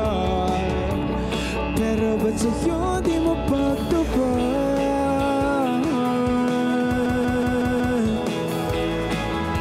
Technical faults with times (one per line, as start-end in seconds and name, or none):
7.06-7.99 system hang loop